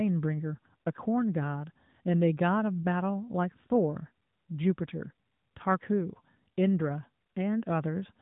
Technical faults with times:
none

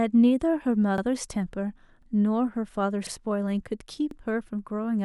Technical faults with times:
0.98-1.02 overlapping chunks
2.02-2.07 overlapping chunks
3.07-3.11 overlapping chunks
4.11-4.16 overlapping chunks

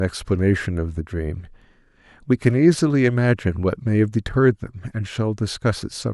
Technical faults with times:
none

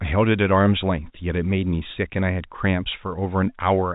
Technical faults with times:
none

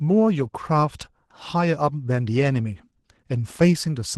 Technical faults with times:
0.00-4.17 Opus voice compression

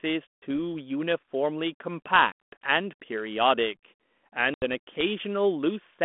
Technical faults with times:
0.37-0.44 packet loss on an ADPCM call
2.32-2.53 packet loss on an ADPCM call
4.54-4.64 packet loss on an ADPCM call

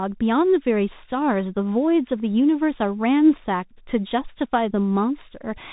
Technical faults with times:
0.00-5.72 Bluetooth CVSD headset codec

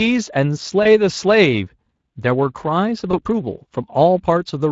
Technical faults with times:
0.00-4.72 Speex codec
0.83-0.87 VoIP packet loss concealed by the speech codec
3.11-3.21 VoIP packet loss concealed by the speech codec

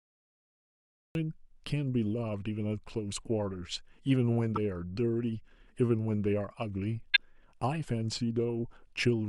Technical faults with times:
0.00-1.15 cut-off start
4.56-4.58 corrupt frame decoded
7.14-7.20 corrupt frame decoded

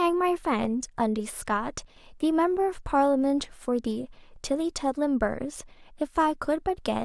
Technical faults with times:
1.85-1.96 one channel drops out

